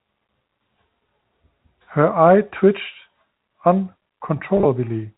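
At 4.57 to 4.65 s there is packet loss with pitch repetition. About 50 ms of audio goes missing, scattered over 80 ms, which fits five short lost packets. The longest gap is 20 ms. Each gap is patched by repeating the last pitch period. The speech briefly sounds held and buzzy, over the band-limited telephone sound of the G.711 line.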